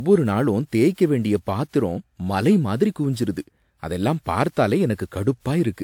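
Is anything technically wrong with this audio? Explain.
Yes, the speech suffers from generation loss throughout. It sounds swirly and hollow, with smeared consonants and softened attacks, more degraded than the bandwidth suggests, since content reaches up to about 20.1 kHz. The likely cause is repeated decoding and re-encoding, roughly five passes through something like WMA at 128 kbit/s. Each pass quantises on a shifted frame grid, so the noise and spectral holes accumulate.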